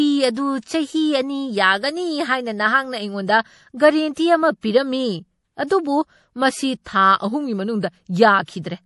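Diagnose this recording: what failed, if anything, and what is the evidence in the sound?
The codec stage is the culprit, likely MP3 compression at a low bitrate, something like 48 kbps. All the way through, the speech has a watery, swirly edge, the s sounds chirp metallically, and there's nothing above 11.5 kHz, which is the encoder lopping off treble and dropping weak frequency lines to save bits.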